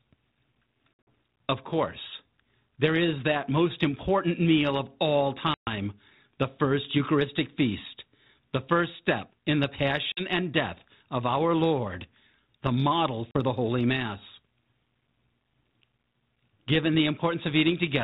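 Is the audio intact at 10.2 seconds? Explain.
No, there's packet loss on an ADPCM call from 10.12 to 10.24 s, after "first step in the": a hard 50 ms gap, which fits about five lost packets. The decoder's predictor then restarts out of step, so the audio comes back rough before settling by "and death of our".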